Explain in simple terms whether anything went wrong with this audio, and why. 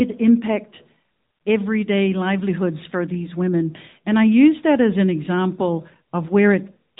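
The speech sounds muffled, like an old phone call, with a plainly buzzy, synthetic edge from start to finish. That comes from the AMR narrowband mobile codec, which rebuilds the voice from a simplified model and passes nothing above about 3.8 kHz.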